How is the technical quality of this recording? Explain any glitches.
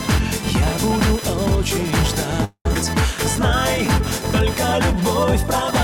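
The technical quality is compromised by an ongoing interference buzz and a short playback stall followed by a jump.

Computer activity noise runs throughout: a buzzing chirp pulsing at around 1 kHz, roughly 15 dB below the sound. Processor or peripheral load shifting the shared ground puts it into the audio circuit. It tracks machine activity rather than the sound, unlike acoustic background noise.

A call audio freeze occupies 2.44 to 2.66 s. The last sound is stretched into a fading buzz or hiss for about 0.21 s, the final 70 ms of it silent, before playback resumes where it stopped. The likely cause is delayed packets draining the jitter buffer. Unlike a dropout, nothing is lost; the gap is inserted.

A skip ahead follows at 2.74 s. Roughly a tenth of a second of audio vanishes and the two sides are butted together with almost no gap. This is the opposite of the freeze: material is missing rather than time being added.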